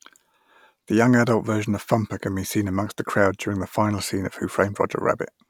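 Nothing stood out as a technical fault on listening to this speech recording.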